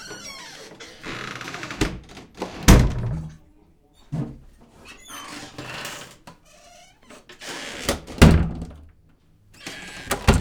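From 3.12 s onward, a section at the wrong speed runs 1.35 times fast. The sound rises about five semitones, likely from a clock mismatch.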